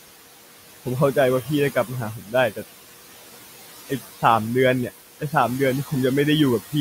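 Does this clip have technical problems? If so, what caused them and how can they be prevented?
Yes. Noise suppressor artifacts run through the whole speech clip. The suppressor judges, frame by frame, which frequency bands hold steady noise and pulls them down by about 17 dB. The room noise, about 12 dB below the speech, sinks in the gaps and comes back under each phrase. To prevent this, use gentler suppression, or lower the room noise at the microphone so less reduction is needed.

There is also speech cut by the noise suppressor from 2.18 to 2.34 s. For this short stretch of about 150 ms, the suppressor mistook part of the speech for noise and turned it down with the background, by about 10 dB at the deepest point. The affected sound comes across as swallowed and faint against the speech around it. To prevent it, slow the suppressor's attack and set its noise threshold so quiet speech sits clearly above it.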